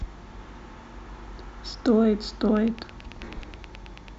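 Speech clip with a train of clicks from 2.57 to 4.09 s: around fifteen evenly spaced pops at 9.2 per second, peaking about 10 dB above the speech, likely from electrical interference or a faulty connection or power supply. They appear as regular thin vertical broadband lines on a spectrogram and sharp spikes in the waveform.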